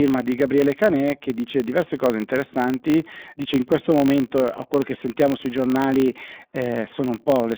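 It's a speech clip running through an iLBC codec for its whole length, and you can plainly hear it. The band is squeezed to roughly 200 Hz to 3.6 kHz with nothing at all above 4 kHz, so it sounds thin and telephone-like, with a rough, slightly synthetic edge. Each 30 ms frame gets its excitation coded on its own, which points to the 13.33 kbps mode. There's also a filter restarted on every block. It loses its state at each block boundary and starts again from silence, so every block opens with a tiny transient. Those add up to a steady 50 Hz buzz under the voice that rises and falls with the level, which fits blocks of about 20 ms.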